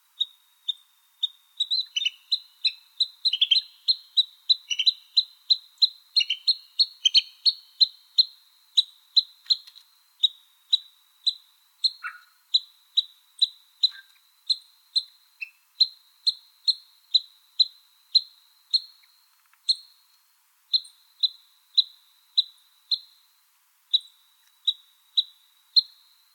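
No technical faults can be heard anywhere in the recording. Nothing in it breaks off, jumps, or pulls the sound out of shape at any point.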